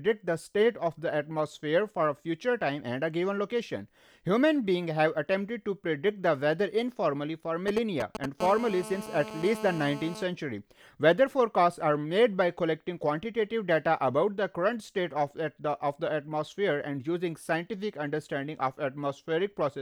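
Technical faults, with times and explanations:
7.68–8.26 s, GSM signalling bursts: a nearby 2G phone sends short radio bursts before a call. The circuit rectifies them into galloping ticks and 217 Hz buzzes, nearly as loud as the speech.
8.40–10.23 s, GSM phone buzz: the phone is now in a call, pulsing 217 times a second. Rectified, this gives a steady, raspy 217 Hz buzz, about 12 dB below the speech.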